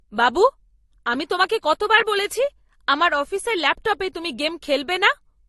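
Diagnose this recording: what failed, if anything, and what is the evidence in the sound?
Codec stage: the speech shows transcoding between lossy codecs throughout. Nothing is present above about 12.1 kHz, with the artefacts of the different codecs heard together. This likely comes from an MP3 near 48 kbit/s re-encoded to Opus near 32 kbit/s, each pass compounding artefacts.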